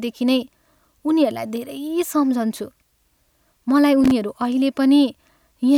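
Loose connector crackle appears from 4.04 to 4.12 s, a short burst of about 75 ms near the end of the speech. A worn or dirty contact in the signal chain is making and breaking as it shifts, so the audio is chopped into fragments for that instant, and any DC present on the line turns each break into a pop. The result is an irregular, scratchy crackle rather than a clean click.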